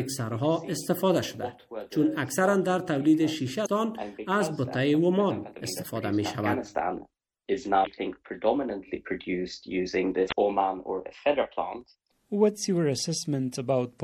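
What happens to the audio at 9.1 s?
At 9.1 s the audio carries the same MP3 compression damage heard across the whole clip: a watery, swirling texture with smeared attacks and metallic chirps on bright, noisy parts, which fits a low bitrate around 64 kbps. With too few bits, the encoder likely cut the treble at a fixed frequency and zeroed weak lines frame by frame. A spectrogram would show a flat ceiling on the high end and patchy, flickering gaps below it.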